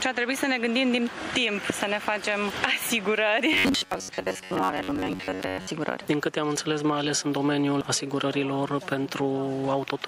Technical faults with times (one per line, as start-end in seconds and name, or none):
3.53-5.73 robotic sound from repeated short buffers